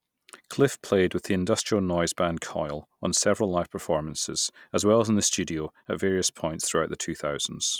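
A speech recording that, from 5.55 s to the end, picks up a fast, regular ticking at 20 per second riding on the audio, a rattle-like grain laid over the sound. The cause is a resampler restarted on every block. The conversion from 48 kHz to 44.1 kHz was run separately on 50 ms blocks, so at each block edge the filter lacked the real neighbouring samples and left a small error, one tick per boundary.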